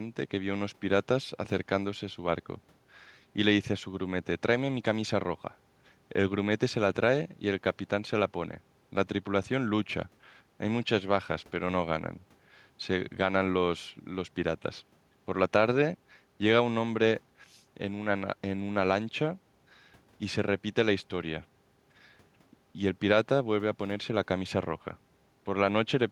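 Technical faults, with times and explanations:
No technical faults can be heard in this speech recording.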